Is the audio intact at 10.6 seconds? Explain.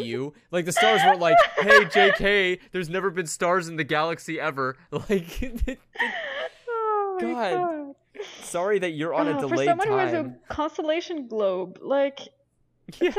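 Yes, the audio is intact at 10.6 seconds, with no dropout, click, distortion or other fault at that moment.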